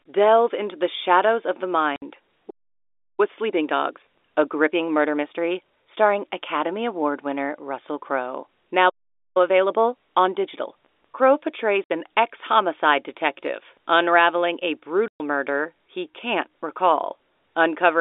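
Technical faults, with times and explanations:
1.96–2.02 s, 11.84–11.89 s, 15.08–15.2 s, packet loss filled with silence: lost packets were replaced by silence, leaving hard-edged gaps of 60, 60 and 120 ms, consistent with 20 ms packets.
2.5–3.2 s and 8.89–9.37 s, playback stall: the player likely ran dry or was blocked, so the sound stops mid-flow for about 0.68 s and 0.46 s before resuming.
3.2–5.92 s and 9.37–11.21 s, time-compressed catch-up: the player trims its backlog by splicing out small slices, so the telephone-band audio runs 1.25 times fast at unchanged pitch.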